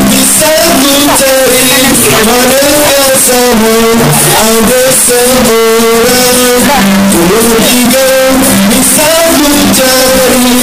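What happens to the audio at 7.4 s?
At 7.4 s the sound is as loud, harsh and squared-off as everywhere else in the clip, with background noise as strong as the foreground. This is likely float read as integer: 32-bit float samples interpreted as 32-bit integers, so sign and exponent bits drive the waveform toward half of full scale.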